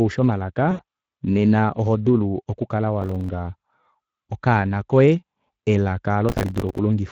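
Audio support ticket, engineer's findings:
Speex codec, whole clip: hoarse, noisy speech with audible coding damage. Points to a mid-rate Speex setting around 20 kbps: too few excitation bits, and a smeared noise-like upper band. Constant throughout, unlike the transient events below.

VoIP packet loss concealed by the speech codec, 0.71–0.81 s: a brief stretched sound that fades. Roughly 80 ms lost, which fits four 20 ms frames. The decoder repeated its last pitch and filter with falling gain.

Processor overload crackle, 3.01–3.29 s: a gritty tearing burst. Repeated missed deadlines on buffers of around 5 ms, about a dozen or more in a row. Each miss replays a short piece of old audio with hard edges. The result is rough clicks, not a decaying tone.

Processor overload crackle, 6.29–6.78 s: the same crackle over a longer stretch, a few dozen missed buffers. It stops abruptly when the load passes.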